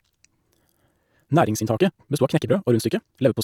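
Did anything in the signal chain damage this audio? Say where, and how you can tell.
Yes. From 1.12 s to the end, the speech runs at about 1.93 times its earlier pace and sounds rushed, yet its pitch holds. That marks a time-stretched section, likely from software squeezing the audio by dropping short pieces. Faster playback would raise the pitch too.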